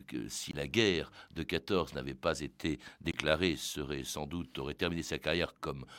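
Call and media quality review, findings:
Block of digital silence, 0.51–0.53 s, just before "la guerre de": speech cuts out to silence for about 21 ms. Length fits a 1024-sample buffer left unfilled by the playback or processing path.

Same fault, 3.12–3.14 s, between "n'avait pas été" and "serait sans doute aurait": identical 21 ms hole. Same buffer size, so likely a recurring buffer underrun rather than a random dropout.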